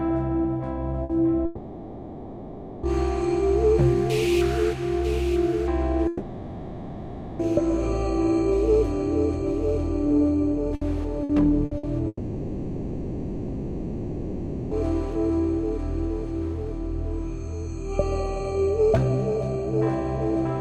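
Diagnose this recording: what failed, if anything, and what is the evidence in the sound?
Network, burst of packet loss: at 1.03, 10.75, 11.23, 11.65 and 11.77 s about 60 ms of sound drops out. The receiver stretches the last bit, then jumps ahead.

Network again. At 1.45–2.86, 6.07–7.42 and 12.07–14.74 s the sound freezes into a fading held continuation and resumes further on, likely a long network dropout.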